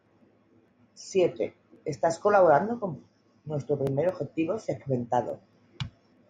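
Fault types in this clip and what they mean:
Dropped samples: three isolated sharp clicks in the speech, at 1.94 s, 4.09 s and 5.30 s, each a thin vertical line across the spectrum. The likely cause is a fraction of a millisecond missing from the stream, forcing an abrupt waveform jump.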